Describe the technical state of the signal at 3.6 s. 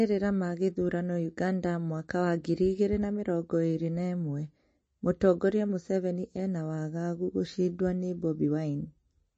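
At 3.6 s you're hearing the same damage that runs through the whole clip, most likely MP3 compression at a low bitrate, something like 32 kbps. Nothing survives above 8.3 kHz, and the weak frequency lines flicker frame to frame, so the speech sounds watery and swirly, with smeared attacks.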